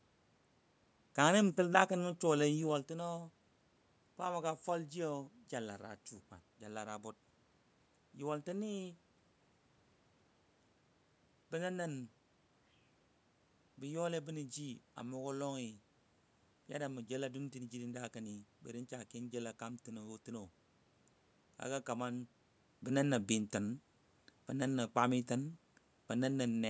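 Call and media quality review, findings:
No system faults found in this speech; the level shifts around 2.5 s and 22.5 s are the talker moving relative to the mic, and the steady background is room noise at the source.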